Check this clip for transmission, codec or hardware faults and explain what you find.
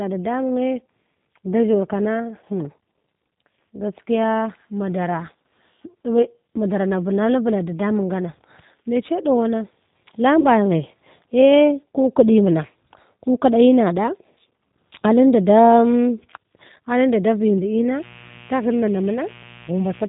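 Three faults are present: codec damage across the whole recording, one concealed packet dropout, and a buzz near the end.

Throughout, the speech has the narrow, slightly rough, synthetic quality of the G.729 codec, pointing to the 8 kbit/s G.729A variant. Each 10 ms frame is rebuilt from a vocal tract filter, a pitch predictor and a few pulses, so nothing above 4 kHz survives. Unlike plain band-limiting, the roughness sits inside the voice itself.

From 10.41 to 10.46 s there is VoIP packet loss concealed by the speech codec. About 40 ms went missing, which fits two lost packets. The decoder stretched its last pitch and filter with falling gain, so the sound becomes a brief stretched, fading smear rather than a clean gap or click.

From 17.9 s to the end, mains buzz at 60 Hz enters, about 25 dB below the speech. Switching spikes twice per cycle add harmonics reaching into the kilohertz range, giving a raspy buzz rather than the smooth tone of a pure hum.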